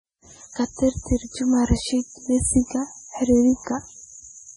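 Speech throughout, and it's carrying heavy MP3 compression damage from start to finish. The treble stops dead at about 10.6 kHz, and the weaker detail keeps flickering in and out from frame to frame, so the whole thing sounds watery and swirly, with chirpy, metallic s sounds and smeared consonant attacks. That degree of damage points to a very low bitrate, likely somewhere around 24 kbps, where the encoder simply runs out of bits.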